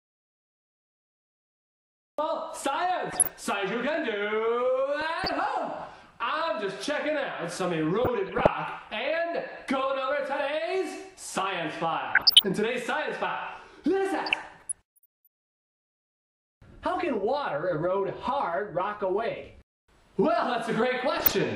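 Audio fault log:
0.00–2.19 s, audio dropout to silence: the clip opens already in this state. There is pure silence, with no room tone or hiss at all, until the sound cuts in abruptly at 2.19 s. Silence that empty means the input was lost entirely while writing carried on with silence. A disconnected source or a mute left engaged is the likely cause. Whatever happened during those two seconds is not recoverable.
3.10–3.43 s, 5.01–5.46 s, 8.02–8.50 s, 12.09–12.44 s, 14.26–15.27 s, 21.17–21.34 s, DAB burbling: six bursts of burbling over the programme. The longest runs for about a second, around 14.3 s. The sound points to weak DAB reception, with a bit error rate of roughly half a percent, worst near 12.1 s at about one percent. At that rate errors slip past correction and corrupt samples in the MP2 frames, putting short blips of noise into individual sub-bands.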